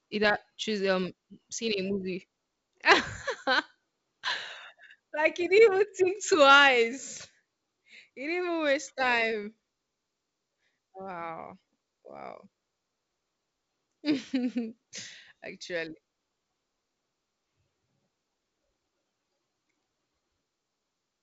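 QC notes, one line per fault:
No faults found.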